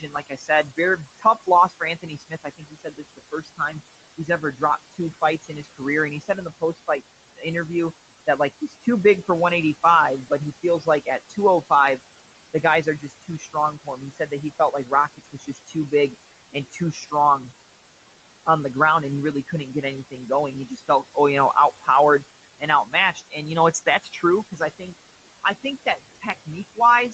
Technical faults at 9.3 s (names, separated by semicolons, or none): noise suppressor artifacts; speech cut by the noise suppressor